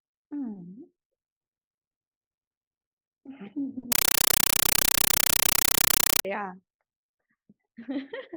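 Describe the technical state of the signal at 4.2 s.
At 4.2 s the speech is gone, replaced by a compressed stream played as audio from 3.92 to 6.25 s. The encoded data, which points to an AC-3 stream, is treated as ordinary samples, so you hear harsh, loud static: 8 ms noise bursts repeating 31.25 times a second.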